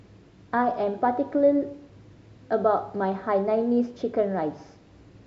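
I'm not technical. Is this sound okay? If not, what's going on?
Yes, nothing in this recording points to a technical problem with how the sound was captured or delivered.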